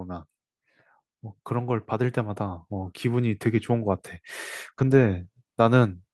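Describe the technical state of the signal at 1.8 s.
At 1.8 s the automatic gain control is rising. This runs from 1.48 to 4.06 s. The control judged the input too quiet and lifts its gain slowly, by about 5 dB. Speech and background swell up together across those seconds.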